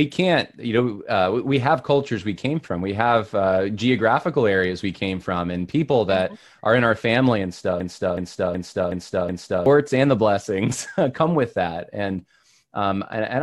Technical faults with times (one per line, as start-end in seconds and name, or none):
7.80-9.66 system hang loop